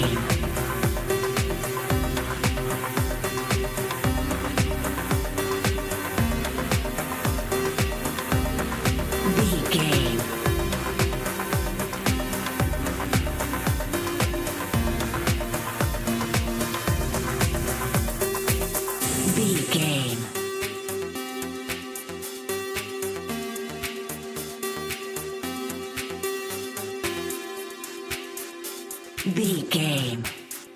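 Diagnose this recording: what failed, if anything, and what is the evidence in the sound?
Nothing failed; no fault is audible anywhere.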